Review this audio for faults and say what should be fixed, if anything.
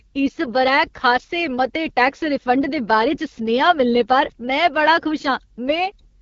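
The whole clip, start to finish, has that AMR wideband (HD Voice) codec sound, and the damage is easy to hear. Nothing comes through above about 7.1 kHz. The speech has a rough, raspy edge because the codec rebuilds the voice from a pulse-driven vocal tract model and pads the top band with shaped noise. That harshness points to one of its lowest modes, which fits roughly 8.85 kbit/s. To avoid it, record or route the speech over a path that doesn't pass through AMR-WB, or at least run it at 12.65 kbit/s or higher.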